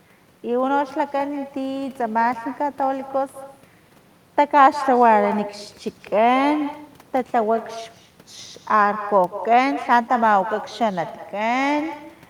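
From start to finish, the speech is trailed by echo with no canceller. The far end plays the call through a loudspeaker. Its microphone picks that sound up again. Nothing removes it, so it travels back down the line. Each phrase returns about a fifth of a second later. The copy sits about 14 dB below the original. It sounds thinner, like a quieter shadow following every syllable.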